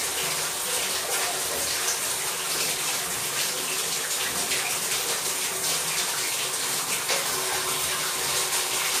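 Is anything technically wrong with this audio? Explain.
Yes, one issue runs the whole way through. Transcoding between lossy codecs is the likely cause, probably MP3 re-encoded to Vorbis: two layers of smeary artefacts stack up, and nothing survives above 15.2 kHz.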